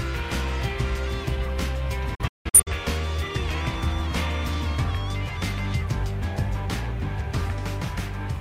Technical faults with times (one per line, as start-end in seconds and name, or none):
2.15-2.72 digital broadcast dropout